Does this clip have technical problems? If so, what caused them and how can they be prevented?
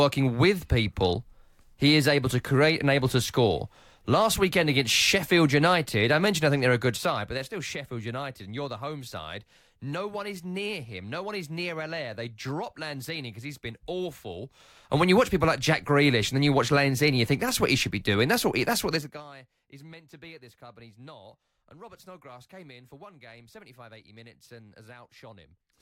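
Yes. Zipper noise ticks over the speech from 14.56 to 15.04 s while the level rises about 10 dB, then zips faster from 18.92 to 19.24 s as it falls about 25 dB. Gain moved in 2 dB steps without smoothing, each step clicking. Ramping gain sample by sample prevents it.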